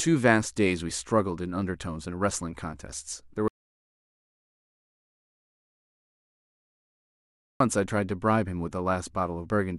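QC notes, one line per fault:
3.48–7.60 s, audio dropout to silence: the speech cuts off abruptly and about 4.1 s of silence follows, with no room tone, before the speech resumes mid-flow. The input was likely lost or muted while recording continued writing silence, so everything in between is gone.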